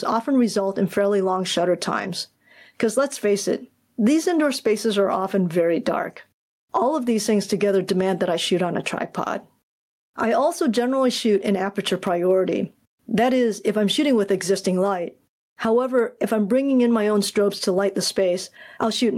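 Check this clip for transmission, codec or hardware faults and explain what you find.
There is one fault, gain pumping, and it runs through the whole clip. The input gain was likely set far too high for the microphone, so a fast limiter or compressor has to clamp down every time the speech gets loud, then release in the pauses. The level swings by around 15 dB, and the speech sounds squashed, with loud and soft parts pressed close together.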